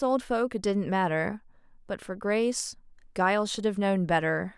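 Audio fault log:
No faults detected in the speech; nothing to log.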